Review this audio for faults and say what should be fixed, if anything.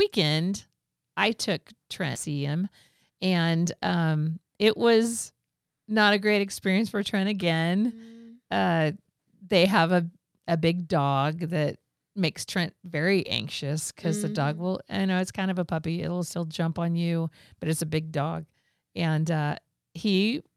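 At 2.15 to 2.17 s there's a skip ahead: about a second and a half of speech just vanishes, with no fill, and the two sides butt straight together. The buffer likely overflowed and threw away queued audio to claw back latency. A fix is to let the buffer shrink gradually instead of discarding big chunks when it's over target.

Right after that there's jitter buffer speed-up, from 2.27 to 2.62 s at 116% speed and from 3.11 to 3.40 s at 110%. Tiny pitch-period slices get cut out back to back, roughly 70 ms and then 40 ms in total, so the talker sounds briefly rushed while the pitch stays put. Capping the compression rate and spreading it over a longer stretch would keep that hurried feel from showing.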